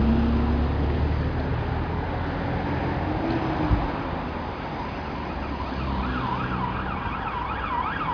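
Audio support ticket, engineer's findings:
No defects found on playback; signal continuous, nothing to action.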